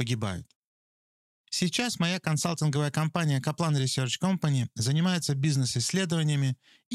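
Nothing to report: the speech recording shows no audible faults at any point.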